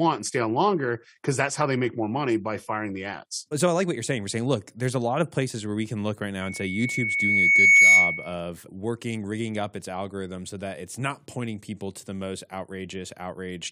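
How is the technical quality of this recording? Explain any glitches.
The speech is marred by one clear glitch. From 6.40 to 8.34 s, just after "we can look right", a piercing 2.2 kHz tone swells over about a second and a half to roughly 15 dB above the speech, then stops before "working rigging up its". This is loudspeaker feedback squeal: the microphone picked up its own loudspeaker, and at 2.2 kHz the loop gain exceeded one, so that frequency kept growing.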